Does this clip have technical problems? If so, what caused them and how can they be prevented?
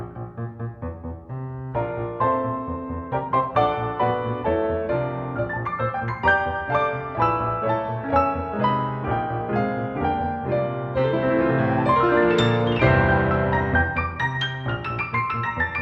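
No, the signal shows no technical faults anywhere in the clip, so there is nothing to trace back to a cause or guard against.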